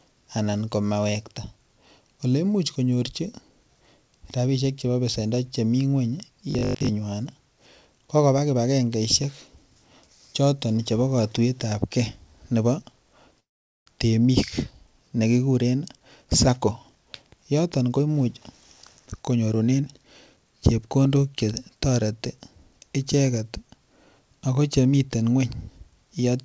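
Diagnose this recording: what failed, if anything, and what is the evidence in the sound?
Robotic sound from repeated short buffers at 6.51 to 6.89 s, a buffer or driver stage fault. The speech collapses into a rigid metallic buzz at 50 Hz, which fits a 20 ms chunk being replayed. Most of that stretch is repeats, likely from input arriving too seldom.

A call audio freeze occurs at 13.40 to 13.88 s, likely a network stall that drained the jitter buffer. The last sound is held briefly and then gives way to 430 ms of silence. Speech resumes where it stopped, with nothing lost, but 466 ms of delay is added.

Jitter buffer speed-up in call processing, at 15.97 to 18.29 s (114% speed) and 18.99 to 20.38 s (110%). Speech sounds hurried at unchanged pitch because short pitch-period slices are cut out, roughly 300 ms and 150 ms in total, to shed excess buffered delay.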